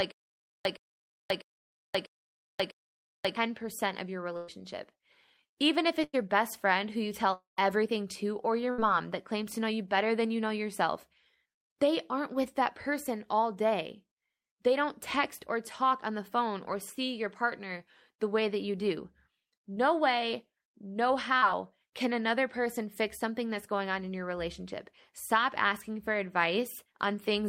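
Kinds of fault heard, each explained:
stutter with silent gaps: The clip opens mid-stutter. From 0.0 to 3.36 s the same 116 ms fragment plays, then about 535 ms of dead digital silence follows, repeating every 651 ms for five returns. This is most likely a stalled player or stream replaying its last fragment at each retry. Unlike concealed loss, nothing fades or smears: the burst repeats identically and the gaps are true silence, with the intervening audio gone.
burst of packet loss: At 4.37 to 4.50 s, right after "of your", about 120 ms goes missing. At 6.04 to 6.15 s about 100 ms is lost. At 8.71 to 8.80 s, between "everything to or your" and "that claims to know", about 80 ms is lost. Each time the receiver stretches the last sound into a held buzz or fading hiss across nearly the whole hole, then jumps ahead. No silence remains, which separates it from a dropout.
long network dropout: From 7.33 to 7.59 s, between "best friend who you" and "everything to or your", about 240 ms never arrived, likely from a network outage. 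The receiver continues the last sound as a decaying buzz or hiss, but it gives out, leaving about 140 ms of silence before the audio returns further on. That audible empty stretch after the fade is what distinguishes it from the shorter, fully covered packet-loss bursts.
short concealed packet loss: At 21.38 to 21.44 s only about 40 ms failed to reach the decoder. The receiver bridges it by extending the preceding sound from its pitch or as shaped noise, then cross-fades back into the real audio. The result is a brief smear or wobble rather than a held buzz. Its much shorter length and the smooth blend back distinguish it from the 80 to 120 ms bursts heard earlier.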